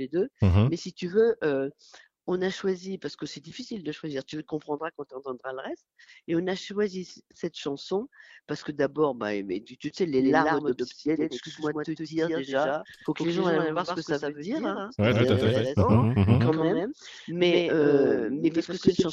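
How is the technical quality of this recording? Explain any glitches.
The recording has one glitch. A doubled audio track starts abruptly at 10.19 s and runs to the end. A second full-band copy trails the original by roughly a tenth of a second, about 5 dB quieter, with no decay or room colour. This is likely a slower second capture path or a misaligned edit, and it gives the sound a hard, slapback echo.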